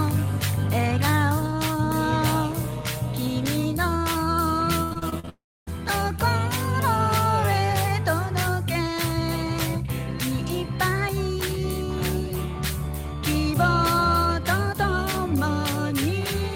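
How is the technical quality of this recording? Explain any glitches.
The recording has two linked network glitches in the middle, around 4.8 to 5.7 s.

From 4.83 to 5.29 s there is repeated packet loss, which gives a robotic sound. Audio keeps going missing in short holes, the longest about 77 ms, and each is patched by stretching the previous sound. Nearly half of this stretch is concealed, so it sounds choppy. Unlike a dropout, real audio keeps returning between the holes.

From 5.29 to 5.69 s the sound breaks off completely. It becomes a brief fading buzz, followed by about 0.27 s of silence, before the audio resumes with that section missing. This is likely a long network dropout. It differs from the robotic stretch because nothing comes through for the whole gap.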